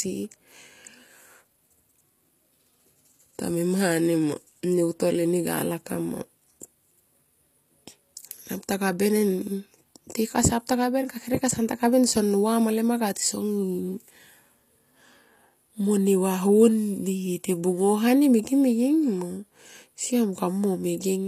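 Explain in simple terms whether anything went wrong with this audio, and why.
Throughout the speech, the s sounds come out gritty and metallic, and nothing is heard above about 15 kHz. This is likely HE-AAC compression, which fakes the treble by copying lower sound upward, so the top stays bright but wrong rather than simply muffled.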